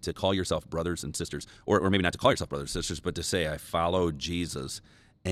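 Software likely squeezed the opening of the speech to about 1.49 times its pace, producing a time-stretched section from 0.00 to 2.56 s that sounds rushed at unchanged pitch.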